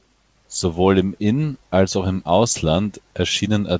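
Nothing goes wrong anywhere in this one; the speech just carries the ordinary character of a wideband call path, with nothing above about 8 kHz.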